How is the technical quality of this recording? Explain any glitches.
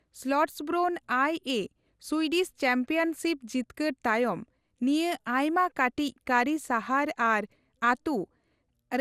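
The recording has one fault, present from start to finish: generation loss, which leaves the speech swirly, hollow and smeared throughout.

Throughout the clip, consonant attacks blur and the tone has a watery, phasey quality heavier than a single lossy pass would give. The likely cause is repeated lossy coding: the audio was decoded and re-encoded about four times, each pass quantising on a shifted frame grid so errors pile up. The sound fits MP2 at around 96 kbit/s. A spectrogram shows nothing above 15.9 kHz, with smeared transients. The waveform looks softened at onsets.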